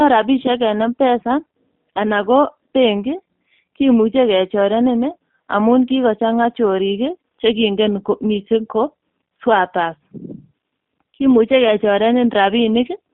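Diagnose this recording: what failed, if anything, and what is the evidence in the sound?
The speech sounds narrow and slightly rough and synthetic for the whole clip, with nothing below about 200 Hz or above 3.6 kHz. This is G.729 codec damage at the codec stage, and the texture points to an 8 kbit/s coder. G.729 does not send the waveform. It rebuilds each 10 ms frame from a vocal-tract filter, a pitch predictor and a few pulses, which produces this plainly audible coarse, buzzy character.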